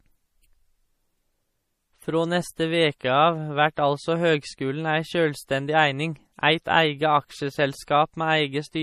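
Throughout the speech there is audible damage, likely from MP3 compression at a low rate, around 40 kbps. Sibilants turn swirly and watery, with metallic chirps. A spectrogram shows a hard ceiling at 15.1 kHz and weak upper bands flickering between frames.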